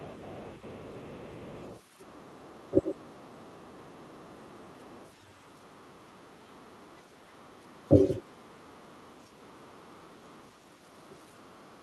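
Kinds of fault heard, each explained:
other side's voice leaking through: A faint second voice sits beneath the talker from the start to about 7.8 s, roughly 30 dB below the main speech. It returns even fainter, around 40 dB down, from about 8.6 s to the end. The likely cause is that the talker's loudspeaker played the far side into the room and the echo canceller left part of that sound in the microphone signal.
speech suppressed in double talk: The talker's voice briefly sinks at about 2.70 to 2.94 s, 4.52 to 4.62 s and 7.86 to 8.19 s. Each dip lasts only a fraction of a second, and the deepest drops by something like 20 to 25 dB. The likely cause is both sides speaking at once. The echo canceller could not tell its own talker from the loudspeaker echo, so it turned everything down.
background gated by the echo canceller: The room sound drops away for about a fifth of a second between 8.24 and 8.44 s, falling by about 12 dB before returning. 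The echo canceller reacted to loudspeaker playback by clamping the microphone hard, and the ambient background was suppressed along with the echo. When the canceller released, the room sound came back.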